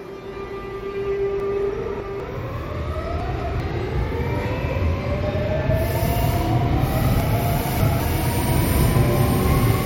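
Chunks out of order at 1.4–2.2 s, 3.2–3.6 s and 7.2–8.0 s: 200 ms blocks play late, one or three chunks behind, giving jumbled sound. A waveform shows three abrupt discontinuities per event.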